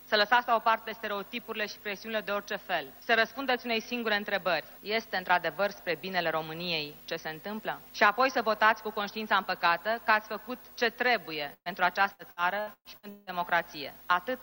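A burst of packet loss at 11.53 to 11.73 s drops about 120 ms of audio; the receiver holds and fades the last sound, then resumes. Repeated packet loss from 12.13 to 13.30 s leaves six gaps, the longest 178 ms, patching nearly half that stretch and making the sound choppy and robotic.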